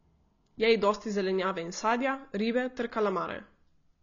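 Throughout the speech, low-bitrate AAC compression is the likely cause: an AAC-LC encoder short of bits, consistent with about 24 kbps, dropped everything above 7 kHz and quantised the remaining spectrum coarsely, leaving the sound dull, band-limited and plainly marked by codec damage.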